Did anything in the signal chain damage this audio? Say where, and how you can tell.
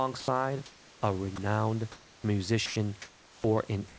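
Yes. In the call processing stage, the sender's voice activity detector likely mistook quiet speech or another sound for background and stopped sending. Sound is dropped by the voice detector at 0.20–0.28 s, 1.36–1.38 s and 2.66–2.76 s. Each gap is filled with steady noise or near silence until the detector triggers again.

In the pauses, the sender likely switched to discontinuous transmission, and the receiver played comfort noise in place of the background at 0.66–1.02 s, 3.02–3.44 s and 3.88–3.98 s. The room's natural texture turns flat and featureless, with level shifts of about -2, 0 and +1 dB.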